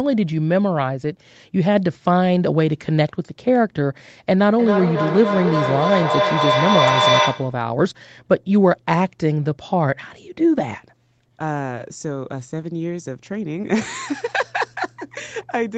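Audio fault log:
4.59–7.7 s, feedback echo between two devices: a second device replays the sound into this microphone, beyond its echo canceller's reach, so it returns roughly every third of a second, peaking about 1 dB above the speech. A spectrogram shows evenly spaced, smeared copies stacking up.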